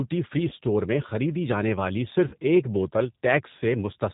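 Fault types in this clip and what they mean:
G.729 codec, throughout: the speech is rebuilt at 8 kbit/s from a vocal tract filter, pitch predictor and sparse pulses, leaving nothing above 4 kHz and a plainly rough, synthetic edge.
VoIP packet loss concealed by the speech codec, 0.49–0.53 s before "میں خریدی جانے والی" and 2.28–2.35 s before "ایک بوتل": the decoder replaces 20 ms and 40 ms of lost audio by stretching its last pitch and filter into a fading buzzy tone or coloured noise, leaving the voice briefly weak.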